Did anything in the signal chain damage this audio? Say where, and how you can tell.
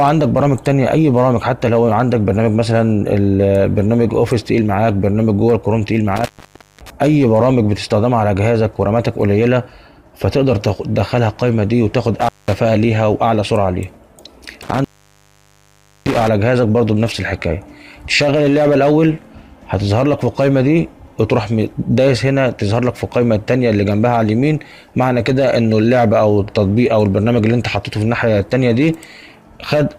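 Yes, an intermittent contact in the analogue wiring. The sound cuts out at 6.16–6.90 s, 12.21–12.54 s and 14.62–16.28 s, open for about 0.56, 0.19 and 1.2 s. A loose connection breaks and remakes, so the waveform drops to near-flat between crackle spikes, and the spectrogram shows broadband vertical streaks around empty gaps.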